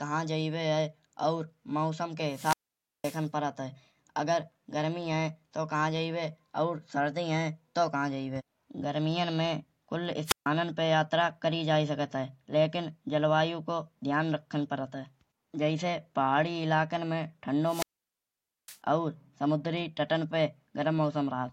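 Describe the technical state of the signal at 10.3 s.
At 10.3 s you're right in a wireless microphone squelch dropout, running from about 10.25 to 10.47 s, just after "जैबे गर्मियान में कुल" and before "पे यात्रा करी जाये". The FM radio link from the mic fades far enough that the receiver's squelch kicks in and mutes its output. There's a short swell of hiss, then a gap of near silence lasting about 140 ms, and then the speech comes back.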